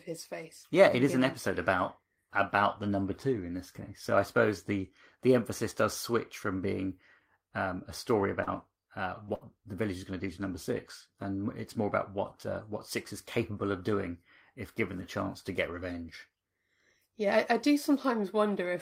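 From 8.19 to 9.43 s, after "from being um a", repeated packet loss (robotic sound) leaves three short concealed gaps, the longest 53 ms, sounding choppy, unlike single dropouts.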